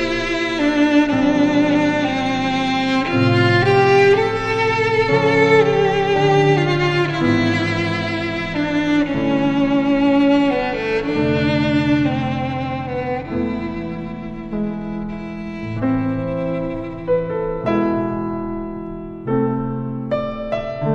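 Nothing goes wrong anywhere in this one; there's simply no technical fault to point to.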